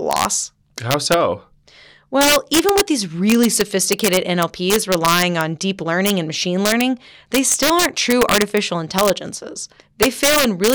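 Integer overflow runs through the whole recording. The speech is driven about 2 dB past the integer limit, and instead of being clamped, each sample that exceeds full scale wraps around to the opposite extreme. Only a small fraction of samples, well under one percent, cross that line, all of them on the loudest speech peaks. Each one produces a sharp, violent crack far harsher than ordinary clipping, scattered wherever the speech is loudest.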